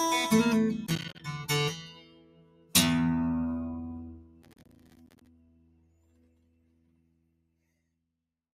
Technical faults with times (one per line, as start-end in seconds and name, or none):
0.00-8.53 noise suppressor applied to music or sounds
0.86-1.20 processor overload crackle
4.42-5.27 processor overload crackle